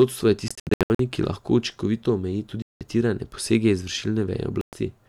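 Speech, cut by silent gaps at 0.48–1.00 s (broken up), 2.62–2.81 s and 4.61–4.73 s, resuming as if it had played on: likely Bluetooth dropout.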